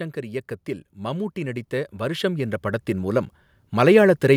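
From 0.14 s to 4.1 s the level climbs steadily by about 12 dB: automatic gain rising. The gain control judged the input too quiet and raised its gain over several seconds, so the speech and the background noise swell together as one.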